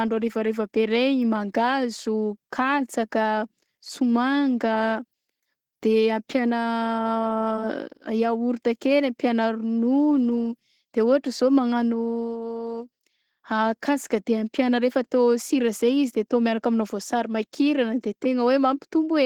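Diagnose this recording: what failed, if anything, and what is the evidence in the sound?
The codec stage is where this one went wrong: it's Opus voice compression, running the whole way through the speech. The band isn't narrowed, and there's content up to about 20.2 kHz, so it stayed in hybrid mode, with SILK handling the low band and CELT covering the top. The excitation is coded coarsely, though, and the speech comes out hoarse and a bit robotic. That plainly audible damage points to a bitrate around 16 kbps.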